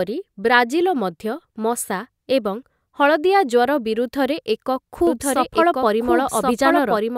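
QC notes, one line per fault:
5.07 s to end: doubled audio track. A second copy of the speech, likely from a slower capture path or an out-of-step edit, cuts in abruptly about one second behind and at roughly equal level, full-band and dry, so two overlapping lines run to the end.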